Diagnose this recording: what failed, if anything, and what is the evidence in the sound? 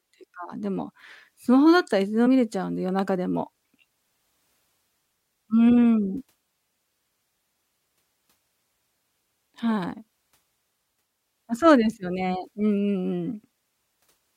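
Compressed frames skipped at 2.25 s, a codec-stage failure: the speech jumps ahead by a couple of 23.2 ms frames, roughly 50 ms lost, which were missing or rejected by the decoder.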